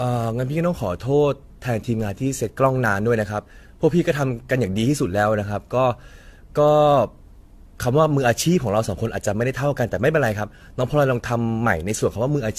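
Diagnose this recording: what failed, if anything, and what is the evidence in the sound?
Codec stage: generation loss, likely from about seven AAC-LC passes near 64 kbit/s, leaves the speech swirly, hollow and smeared throughout, empty above 14.2 kHz.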